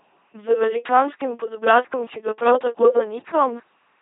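LPC-10 vocoder damage runs through the whole speech clip. Each moment is rebuilt from a ten-pole vocal tract filter driven by either a pulse train or noise, giving a heavily buzzing, robotic voice, with nothing above 3.8 kHz, which fits a 2.4 kbit/s coder.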